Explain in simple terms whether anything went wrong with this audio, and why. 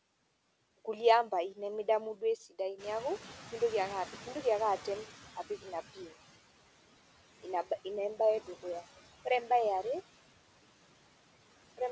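Two things went wrong, both caused by the noise suppressor. This is the part of the call system that tries to remove background hiss and hum.

Noise suppressor artifacts run through the whole clip. The suppressor lowers the background noise band by band, moment by moment. So the noise sinks between phrases and comes back under them. What remains can warble or flutter. The speech itself can sound thin or watery, like it's coming through water.

The noise suppressor catching up happens from 2.78 to 5.81 s. Around 3 s, the room noise suddenly gets louder. The suppressor still expects the quieter background from before. So at first the louder noise comes through with less reduction. Over about three seconds, the suppressor adjusts, and the noise gradually sinks again. You hear a burst of background that slowly fades down.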